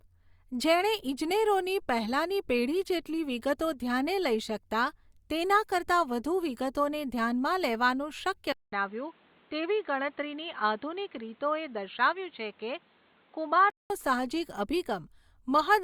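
Right after "વધુ વિગતોને ધ્યાનમાં લેવાનું", at 8.52 s, the speech drops out for 200 ms. It then returns dull and boxy, with nothing above 4.3 kHz. A faint new background noise sits well below it. Level holds steady. Until 13.90 s, this is likely an input switched to a poorer device.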